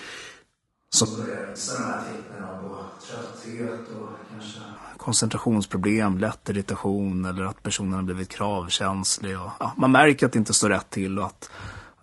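From start to finish, the speech has a rough, grainy edge. This is most likely low-delay AAC compression, the AAC-ELD kind used in video calls. Its short frames capture pitch harmonics poorly. The damage is plainly audible and points to a low bitrate. Noise fills the gaps between harmonics. The top band sounds thin and synthetic, not natural. Every part of the clip carries this coarse texture.

At 1.06 s, the sound suddenly turns roomy and hollow. This is a switch to a distant microphone, likely because the close microphone dropped out and a farther one took over. The level falls by about 10 dB. Bass thins out. A faint bed of room noise rises, well below the speech. At 4.77 s, the close sound snaps back just as abruptly.

Within that distant stretch, from 1.51 to 1.58 s, comes a brief AAC frame loss with concealment. About 40 ms of audio went missing, which fits roughly two lost frames. 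The decoder filled the gap from the last good spectrum. It comes across as a short smeared, noisy or phasey patch. The gap is too brief to fade into silence.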